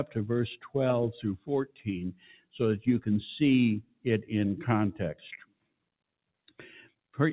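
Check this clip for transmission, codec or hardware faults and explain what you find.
Two related faults come from a speech-oriented processing stage rather than from the transmission itself. The sound passes through a call path with nothing above 4 kHz, which fits G.711 mu-law.

A noise suppressor applied to music or sounds runs through the whole clip. It treats sustained tones and tails as noise, swinging gain by about 15 dB, so the audio pumps and thins. On a waveform the envelope flutters, and on a spectrogram the decays are gappy.

Sound is cut by the noise suppressor at 1.66–1.87 s, 2.12–2.57 s, 3.82–4.06 s and 5.41–5.84 s. Level drops about 19–20 dB, so held sound sinks. These spans show as dark holes on the spectrogram and notches on the waveform.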